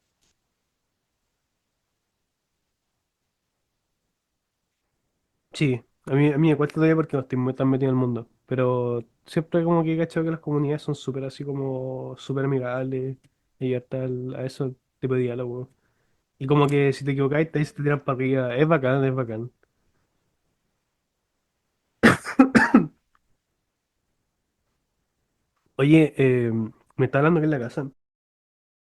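No technical faults are audible in this speech.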